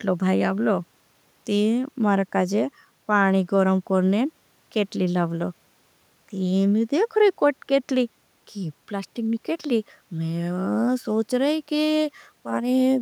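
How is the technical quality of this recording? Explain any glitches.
No glitches or technical faults can be heard anywhere in the recording.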